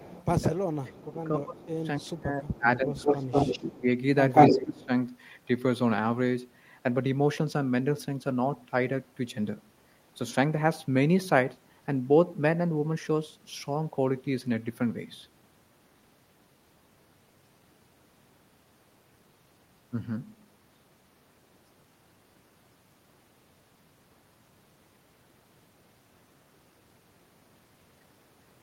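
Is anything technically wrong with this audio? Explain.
Yes. From 0.0 to 3.88 s, and again from 4.47 to 4.9 s, the speech dips and thins in pieces, falling by about 20 dB at its deepest. This is speech suppressed in double talk, likely an echo canceller turning down its own talker along with the loudspeaker echo when both talked at once.

There is also echo leak. A faint delayed copy arrives 274 ms late at 0.09–0.25 s. From 1.63 to 4.86 s a strong copy 186 ms behind is about 5 dB louder than the speech, likely loudspeaker pickup the far end's canceller failed to remove.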